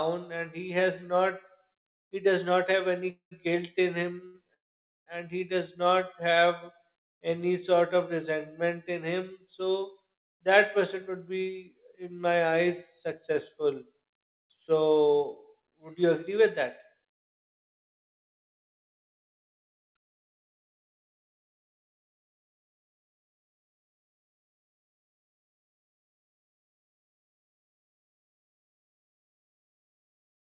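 At 3.10 s the speech stops in a call audio freeze lasting until 3.33 s. The last sound carries on briefly as a fading buzz, then about 120 ms of silence follows. About 212 ms of time is inserted in total. The speech then resumes exactly where it broke off, with nothing lost. The likely cause is packets held up in transit, so the jitter buffer ran dry.

At 4.26 s comes a short stall from a late packet, ending at 4.36 s. One packet was missing when it was due. The receiver stretched the last sound by about 77 ms until the packet arrived. You hear one sound held slightly too long, with a faint buzz. No speech is missing.

A second call audio freeze runs from 4.54 to 5.08 s. This one is longer. About 522 ms is inserted, and around 510 ms of it is near silence after a very brief held tail. Then the speech picks up again from the same point. Again, the likely cause is delayed packets draining the jitter buffer.

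From 5.83 to 6.45 s there is a jitter buffer slow-down. The buffer was low, so the receiver repeated single pitch periods to rebuild its reserve. About 46 ms is added. The speech runs at roughly 94% speed over this stretch. Sounds are drawn out, but the pitch stays the same.

From 18.17 s to the end at 30.41 s, a jitter buffer speed-up is running. The buffer held more than its target. The receiver kept trimming tiny pitch-period slices to cut the delay. Roughly 0.4 s is removed overall. The speech runs at about 103% speed at unchanged pitch.

Throughout, the call path uses G.711 mu-law. Nothing is heard above 4 kHz.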